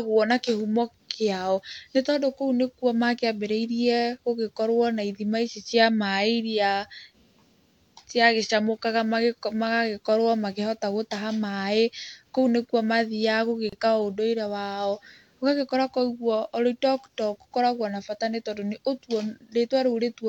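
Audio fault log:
13.69–13.73 s, gap at a join of encoded pieces: the speech drops into about 31 ms of silence, then resumes from where it stopped. The pieces were encoded separately and joined untrimmed, so one run's final-frame padding and the next run's start-up delay both remain. On a waveform this shows as a flat strip with abrupt, slightly softened edges. On a spectrogram it is a clean vertical blank band cutting across all frequencies.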